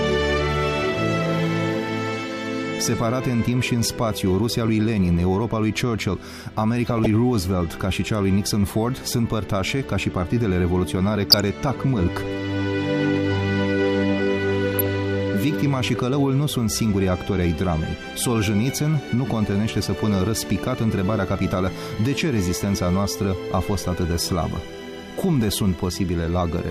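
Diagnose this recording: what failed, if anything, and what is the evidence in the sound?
Weak DAB reception let bit errors into the MP2 codec data, causing DAB burbling: short noise blips in single sub-bands at 6.86–7.06, 11.30–11.40 and 14.72–14.89 s.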